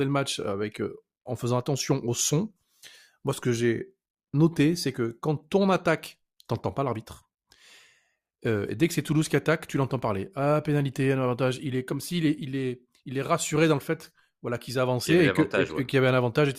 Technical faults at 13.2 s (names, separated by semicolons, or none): none